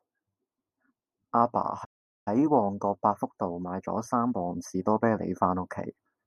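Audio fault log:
1.84–2.28 s, playback stall: the speech cuts off mid-flow into about 0.41 s of silence, then resumes. This is likely the player running dry of buffered data, or its output thread being blocked, so nothing reached the output until it recovered.
2.28–5.04 s, time-compressed catch-up: the speech sounds hurried, about 1.15 times normal speed, yet keeps its pitch. The player is trimming the backlog left by the stall, cutting out small slices and cross-fading across the joins.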